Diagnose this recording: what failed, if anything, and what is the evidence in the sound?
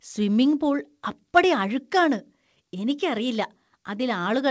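The fault is in storage and playback: CD scratch ticks. Between 3.17 and 3.70 s the speech carries four brief, evenly spaced ticks, the longest around a millisecond and a half. A surface blemish defeated the disc's error correction once per revolution, and the player concealed the damaged samples.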